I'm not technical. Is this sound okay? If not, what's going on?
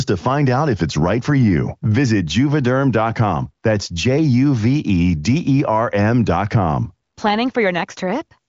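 Yes, nothing stood out as a problem when listening to this speech clip.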